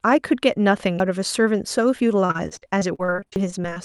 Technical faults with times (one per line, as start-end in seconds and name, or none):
1.00 dropped buffer (overrun)
2.25-3.79 repeated packet loss (robotic sound)
3.36 dropped buffer (overrun)